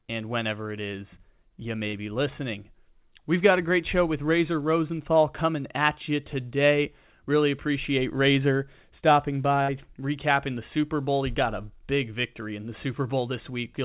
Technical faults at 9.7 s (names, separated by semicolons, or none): burst of packet loss